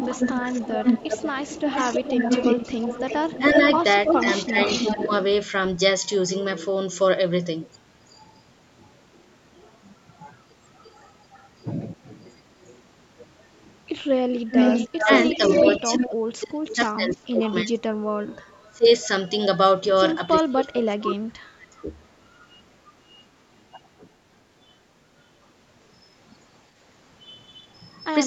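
From 0 to 5.17 s a delayed copy of the speech follows it by about 0.32 s, roughly 5 dB below the original. This is an echo leak, likely from a loudspeaker-side echo canceller that let its microphone pickup return. It is a distinct repeat rather than a reverberant smear. Between 3.38 and 5.11 s the speech dips by around 10 dB for roughly 0.4 s in total. That is speech suppressed in double talk, likely where the canceller turned down its own talker along with the loudspeaker echo while they overlapped. Unlike random dropouts, the dips line up with the other talker. A faint echo returns from 10.83 to 12.72 s, about 0.34 s late and some 35 dB down. From 14.34 to 19.08 s the echo comes back about 0.36 s late and as loud as the speech itself. Heavier double-talk suppression runs from 14.99 to 21.89 s, with drops of up to about 35 dB that affect the speech for roughly 4 s in all.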